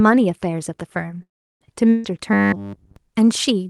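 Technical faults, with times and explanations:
1.22 to 1.62 s, call audio freeze: the sound stalls for about 0.39 s, briefly continuing as a fading buzz or hiss and then about 0.34 s of silence, before picking up exactly where it stopped. Nothing is skipped, which separates it from packet loss; held-up packets are the likely cause.
1.90 to 2.05 s, burst of packet loss: roughly 0.15 s of sound is concealed by a held, fading continuation of what came before, then the audio jumps ahead. Unlike the freeze, the material in that gap is gone rather than delayed.
2.33 to 2.96 s, robotic sound from repeated short buffers: the speech turns into a rigid metallic buzz locked at 100 Hz, consistent with a 10 ms fragment being replayed over and over. Roughly 70% of the audio is repeats, likely from audio arriving too seldom to keep the stream fed.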